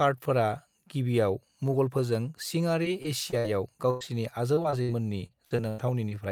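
From 2.83 to 3.46 s, repeated packet loss (robotic sound) begins. Four short gaps, the longest 59 ms, are patched by extending the preceding speech, covering about 18% of the stretch. The result is choppy and robotic. On a spectrogram, the harmonics freeze into flat, smeared blocks.

A burst of packet loss follows from 3.90 to 4.04 s. About 100 ms of speech is lost and replaced by a decaying continuation of the last sound that fades without reaching silence. The waveform shows a smooth, shrinking envelope before the speech resumes further on.

Within that burst, at 4.01 s, one 20 ms lost packet is rebuilt from error correction. It leaves no gap, but the frame sounds rougher and noisier, and a spectrogram would show a thin, grainy slice.

The robotic repeated loss returns from 4.55 to 4.90 s. Four gaps, the longest 56 ms, cover about 32% of the span. It recurs from 5.26 to 6.15 s with five gaps, the longest 92 ms, concealed across about 24%. 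Both stretches show the same frozen, striped patches.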